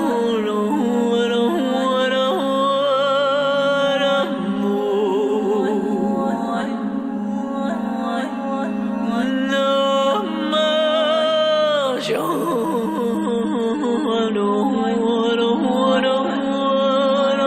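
From 13.18 s, the adaptive stream drops to a lower bitrate: an abrupt, gapless loss of treble, with the spectrogram empty above 13.3 kHz.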